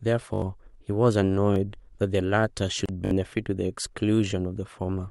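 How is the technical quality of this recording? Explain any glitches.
The speech has four audible glitches: three stutters from repeated buffers and one short dropout at a join.

Repeated buffer: at 0.34 to 0.42 s, 1.54 to 1.56 s and 3.05 to 3.11 s, the same tiny slice replays with hard joins, which fits a 20 ms buffer being replayed when fresh audio arrived late. The first and last repeat several times, so they sound like a brief buzzy stutter and swallow roughly 70 ms of speech. The middle one repeats once, giving more of a click.

Gap at a join of encoded pieces: at 2.86 to 2.89 s, a silence of about 31 ms cuts into the speech with slightly smeared edges, and the speech then continues where it left off. That comes from separately encoded chunks being stitched together with their start delay and end padding left in.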